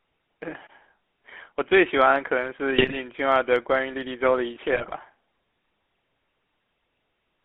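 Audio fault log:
Throughout: GSM full-rate codec. The speech has a buzzy, gravelly roughness that is plainly audible. The codec rebuilds the voice from a vocal-tract model driven by regularly spaced pulses. Much of the excitation detail is thrown away, so the voice sounds coarse. The band runs from about 250 Hz to 3.4 kHz, giving a thin telephone tone. The low bitrate, which fits 13 kbps, leaves little room for fine detail.
2.78–2.97 s and 4.72–4.93 s: GSM bit errors. Two short bursts break the speech into squawks, pops and gargling. Corrupted bits reached the decoder, damaging the filter, pitch or gain values for several frames in a row. The spectrum bends or the level jumps within the bursts. The second burst is a little longer, with a higher error rate of about 3.3 percent against roughly 1.9 percent in the first.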